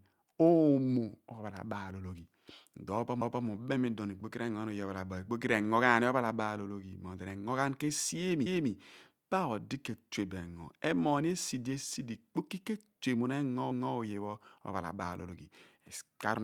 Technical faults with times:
3.21-3.46 overlapping chunks
8.46-8.71 overlapping chunks
13.71-13.96 overlapping chunks

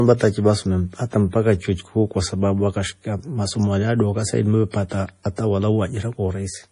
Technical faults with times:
0.00-6.72 MP3 compression

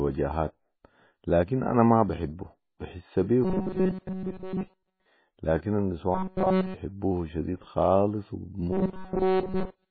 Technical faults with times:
0.00-9.91 MP3 compression
6.15-6.75 robotic sound from repeated short buffers
8.72-9.91 robotic sound from repeated short buffers

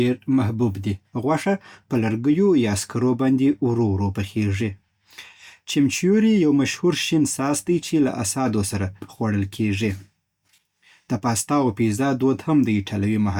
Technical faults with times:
none

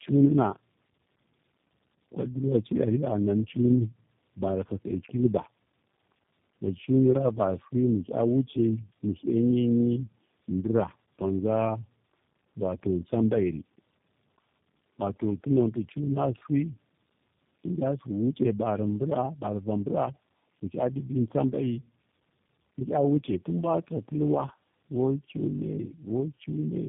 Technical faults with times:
0.00-26.88 tandem speech coding

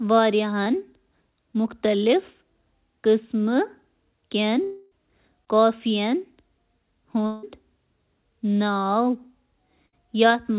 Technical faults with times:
0.64-0.68 short concealed packet loss
4.64-4.93 long network dropout
5.45-5.48 short concealed packet loss
7.26-7.45 long network dropout
9.87-9.94 burst of packet loss

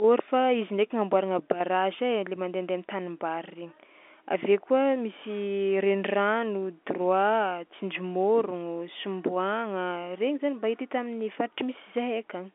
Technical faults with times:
none

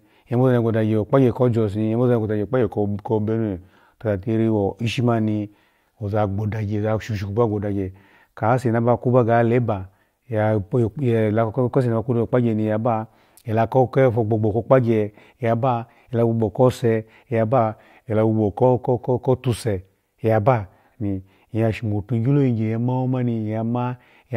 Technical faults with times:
2.62-3.70 drift correction step
17.58-18.64 drift correction step

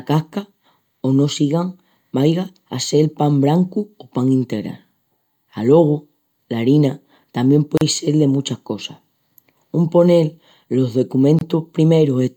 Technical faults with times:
7.77-7.81 gap at a join of encoded pieces
11.39-11.41 gap at a join of encoded pieces

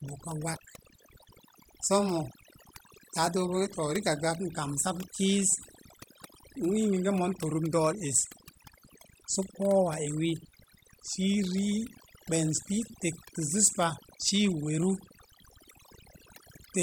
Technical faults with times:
0.00-16.82 overdone noise removal

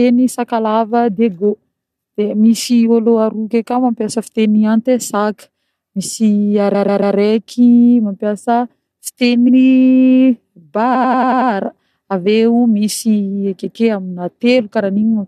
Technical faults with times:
6.74-7.15 repeated frames
9.48-9.55 repeated frames
10.94-11.50 repeated frames

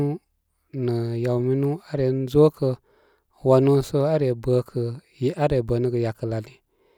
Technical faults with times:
none

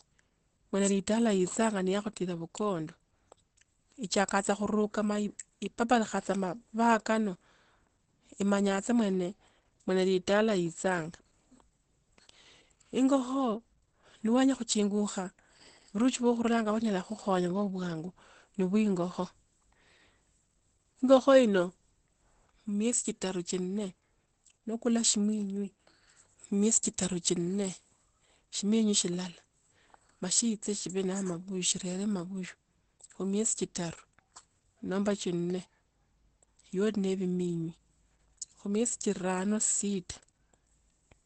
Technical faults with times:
0.00-41.26 Opus compression

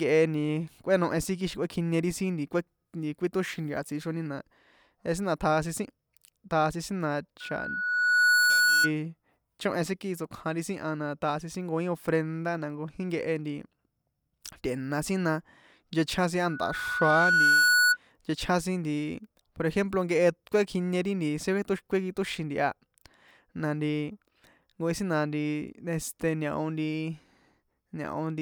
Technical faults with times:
7.40-8.91 loudspeaker feedback squeal
16.49-17.97 loudspeaker feedback squeal

